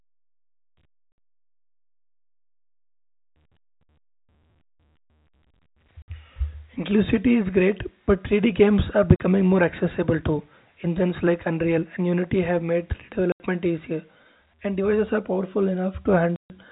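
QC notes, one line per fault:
1.12, 6.02, 9.16 (after "games are"), 13.32 and 16.36 s, packet loss filled with silence: gaps of 60, 60, 40, 80 and 140 ms, all multiples of 20 ms, which fits 20 ms packets. On the waveform they are flat, near-silent runs with hard edges, and on the spectrogram blank vertical strips through the band-limited telephone audio.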